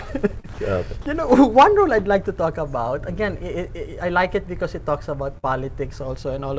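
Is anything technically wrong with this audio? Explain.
Yes, there are three kinds of dropout, all typical of audio that has been through a call path. That path also cuts everything above about 8 kHz.

At about 0.40 to 0.46 s there's a short concealed packet loss. Roughly 40 ms never arrived in time, so the receiver stretched the preceding sound to cover the gap, leaving a brief smear.

At 0.54 to 0.58 s and again at 1.02 to 1.06 s the sound briefly gives way to flat background noise for about 40 ms. That's likely sound dropped by the voice detector, with comfort noise filling in until sending resumed.

At about 5.38 to 5.45 s there's a burst of packet loss. Around 60 ms went missing, and the decoder held and faded the last sound before jumping ahead, so that stretch is simply gone.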